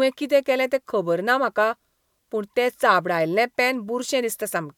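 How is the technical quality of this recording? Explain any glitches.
No glitches can be heard anywhere in the recording. Nothing in the speech calls for a technical explanation.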